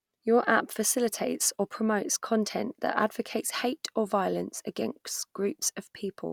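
No technical faults are audible anywhere in the speech recording.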